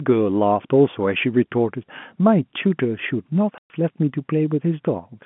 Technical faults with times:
3.58-3.70 packet loss filled with silence

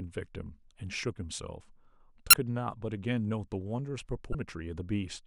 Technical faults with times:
2.30-2.34 damaged data in a compressed stream
4.31-4.35 damaged data in a compressed stream

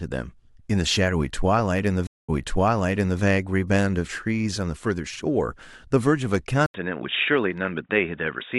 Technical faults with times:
6.66-8.58 input switched to a poorer device

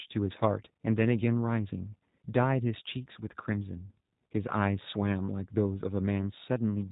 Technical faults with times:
0.00-6.92 G.729 codec

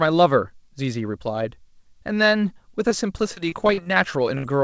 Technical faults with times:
2.89-3.97 repeated packet loss (robotic sound)
4.38-4.44 burst of packet loss

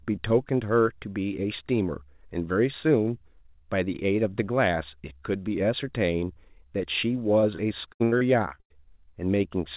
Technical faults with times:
7.40-8.72 repeated packet loss (robotic sound)

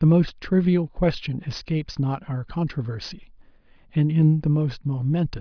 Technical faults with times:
none

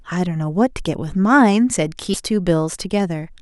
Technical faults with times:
2.13-2.16 stream segment skipped

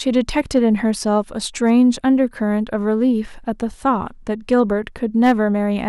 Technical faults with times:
0.17-0.58 hard clipping
1.67-1.72 hard clipping
4.52-4.60 hard clipping
5.24-5.32 hard clipping

